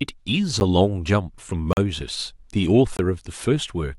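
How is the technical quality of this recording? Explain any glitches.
The speech is interrupted three times by abrupt dropouts, each a block of digital silence. At 0.6 s a 10 ms gap sounds like a sharp tick. From 1.73 to 1.77 s a 40 ms gap is heard as a short hole. From 2.97 to 2.99 s a 20 ms gap falls between the two. In each case a run of samples was replaced by zeros, so the waveform drops straight to silence and jumps back without any fade.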